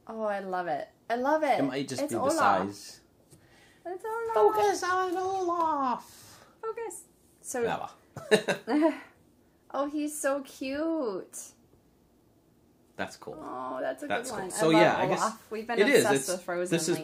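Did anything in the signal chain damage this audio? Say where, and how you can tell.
No, nothing in the signal chain stood out as damaging this audio on listening.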